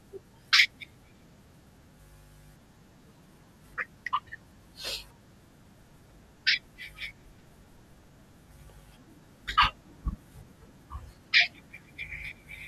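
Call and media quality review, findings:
Skip at 8.30 s in the speech, with the sound jumping forward and no gap of silence. Dropped buffer (overrun), likely in the capture path: input samples not read before the hardware overwrote them, so about 20 ms of audio is missing and the surrounding pieces butt together. The splice produces the audible skip.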